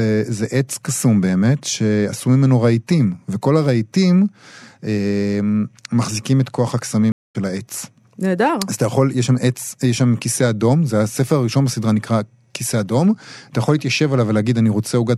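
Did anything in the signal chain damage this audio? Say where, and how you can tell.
Yes: a stream reconnect at 7.12 to 7.36 s, a network-stage fault. The speech drops to about 0.21 s of silence, then resumes somewhere around 150 ms further on, so a stretch is skipped. The player lost its connection, reconnected and restarted its decoder mid-stream at a later point.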